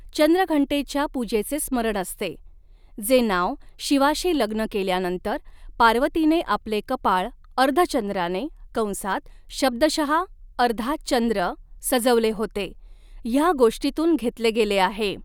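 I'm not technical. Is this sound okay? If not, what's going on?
Yes, nothing wrong can be heard anywhere in this speech recording.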